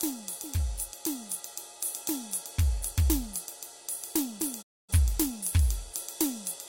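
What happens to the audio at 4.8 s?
At 4.8 s the music is silent: it fades out over about 20 ms at 4.61 s and stays muted until 4.94 s, then resumes further along the programme rather than where it stopped. This is a digital broadcast dropout. The receiver lost the signal or got frames that failed their checksum, so it muted until good frames arrived. About 256 ms of music went missing, which fits roughly six lost frames.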